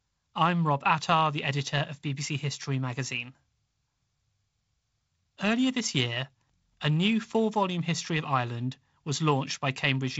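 Nothing stood out on listening to this speech, which comes over what sounds like a G.722 wideband telephone link with nothing above about 7.7 kHz.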